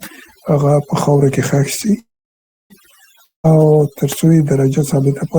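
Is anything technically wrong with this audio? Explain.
Yes. Three faults can be heard in this speech clip.

Overdone noise removal affects the whole clip. A noise reducer set far too aggressively pulls down any frequency band that sits near its noise estimate. Quiet parts of the voice get cut along with the hiss. Between phrases the background drops to near silence, dotted with small twinkling specks. The voice has its softer detail stripped away.

A call audio freeze runs from 1.99 to 2.72 s. The last sound carries on as a brief fading tone. Then about 0.64 s of near silence follows, roughly 0.71 s in all. Packets were likely held up in transit, so the jitter buffer ran dry. The speech then resumes where it stopped. Nothing is lost, but everything after now arrives about 0.71 s later.

A long network dropout occurs from 3.24 to 3.46 s. Again the last sound is stretched into a short fading buzz, and about 0.14 s of silence follows. 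This time the audio returns further along. About 0.2 s of speech is simply gone. The cause is likely a stretch where no packets arrived at all, so that portion was never played.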